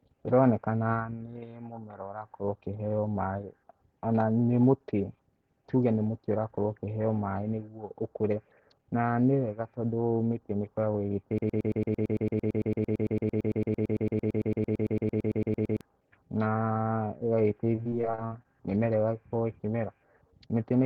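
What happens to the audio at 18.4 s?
At 18.4 s the speech is near the end of a burst of repeated packet loss (robotic sound) running from 17.75 to 18.46 s. Eight gaps, the longest 53 ms, were each patched by extending the preceding sound, so about 27% of that stretch is filler. Unlike one silent dropout, this gives a choppy stutter with pieces missing.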